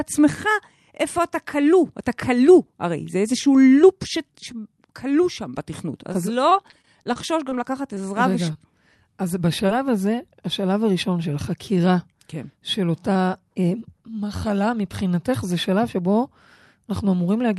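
Speech carried over a call link whose audio stops at about 12 kHz, which fits Opus. From 6.13 to 7.53 s there is repeated packet loss with a robotic sound. Short holes arrive one after another, about nine in all. The longest lasts about 21 ms. Each hole is patched by extending the last sound, so roughly a tenth of that stretch is synthetic. The speech turns choppy, with small pieces gone.

Three shorter events follow as short concealed packet loss. They occur at 7.95 to 8.02 s, 8.53 to 8.57 s and 9.67 to 9.70 s. Each loses about 20 ms of audio. The receiver bridges each gap by continuing the previous sound and then blends back into the real signal. The first one also adds a slight stretch. Each is heard as a brief smear or wobble.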